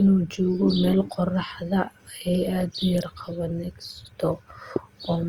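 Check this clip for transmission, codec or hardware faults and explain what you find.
One codec fault runs through the whole clip: Opus compression, from start to finish. The damage is plainly audible. The encoder is likely running Opus in its music (CELT) mode at a low rate, which fits roughly 24 kbps. It keeps each band's energy but runs short of bits, so it fills bands by folding lower content upward or with noise. The speech sounds rough and grainy rather than swirly, while the bandwidth stays full, with content reaching about 20.2 kHz.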